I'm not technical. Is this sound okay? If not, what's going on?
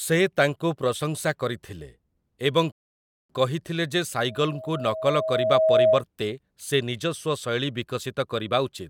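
No, there are two problems in this speech recording.

A rebuffering stall happens from 2.72 to 3.30 s. The player ran out of audio it had already downloaded, so it stopped and waited for more. You hear a sudden gap of silence of a little over half a second, and then the speech carries on exactly where it left off. Nothing is missing, but the clip takes longer to play.

A loudspeaker feedback squeal runs from 4.25 to 6.04 s. A microphone was picking up the sound of the loudspeaker it was feeding, so the sound went round and round and kept getting stronger at one pitch, a whistle-like tone at 636 Hz. The tone swells over about a second and a half until it is louder than the speech itself.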